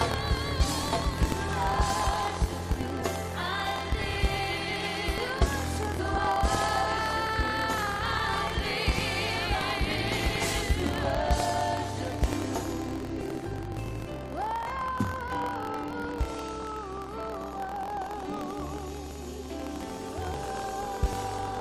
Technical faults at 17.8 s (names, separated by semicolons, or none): buffer tearing; compressed frames skipped